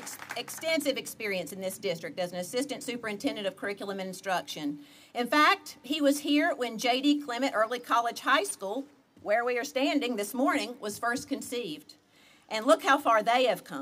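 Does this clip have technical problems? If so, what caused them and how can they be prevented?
No, this clip has no technical problems, so there is nothing to prevent.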